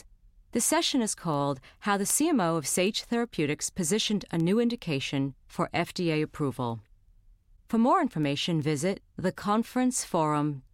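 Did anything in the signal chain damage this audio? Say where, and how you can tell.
Yes. The damage is at the digital interface between two devices, a word clock fault. Sharp ticks run through the speech from 0.19 s to 10.53 s. They come at a steady rate, about one every 0.4 s, roughly 30 in all, with uneven strength. The receiving device runs on its own clock, not locked to the sender's. They drift apart, likely by around 50 ppm. At each slip a sample is dropped or repeated, giving a tick.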